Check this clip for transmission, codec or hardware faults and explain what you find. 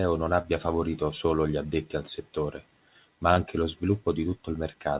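Two short concealed packet losses, and they're the only faults here. The band stops at 4 kHz, which points to a G.711 mu-law call path at 64 kbps. At 0.42 to 0.46 s and again at 3.34 to 3.38 s, about 20 ms of audio never reached the decoder in time. The receiver patched each gap by extending the preceding sound and then blending back in, so each one comes across as a quick smear or little wobble.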